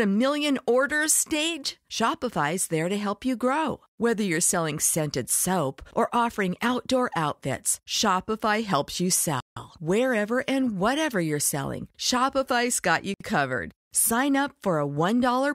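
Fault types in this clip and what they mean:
Bluetooth stall: Radio interference likely delayed packets on the wireless link, so the headphones' buffer ran empty and playback paused until the resent data arrived. In this speech the sound cuts abruptly to silence twice: for about 0.16 s just after "helps you" at 9.40 s, and for about 0.06 s just after "got you" at 13.14 s. Each time the audio then carries on after the gap.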